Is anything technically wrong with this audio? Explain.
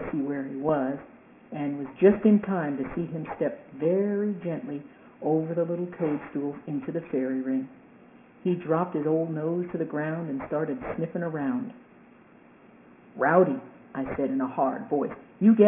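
Yes. Aliasing runs throughout: the sample rate was cut without an anti-alias filter, so energy above about 3 kHz folds back below it, which fits a drop to roughly 6 kHz. The misplaced tones sit about 20 dB under the sound, giving a gritty, metallic edge right up to the band limit.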